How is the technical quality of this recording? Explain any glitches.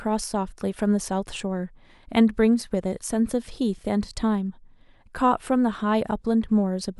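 There is one glitch in this speech recording, a bit error spike at 2.18 s. A single flipped bit makes one sample jump by a power of two and snap straight back, peaking at about -35 dBFS. It sounds like a sharp tick. On a spectrogram it appears as a thin vertical line across all frequencies, and on the waveform as a lone one-sample needle.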